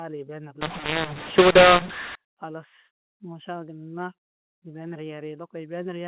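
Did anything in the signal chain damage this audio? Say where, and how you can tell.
Yes: a mu-law and A-law mix-up from 0.61 to 2.15 s, at the codec decode stage. The speech turns harsh and distorted and the pauses fill with noise, because mu-law bytes were expanded on the A-law curve, scrambling levels and lifting the quietest samples well above silence.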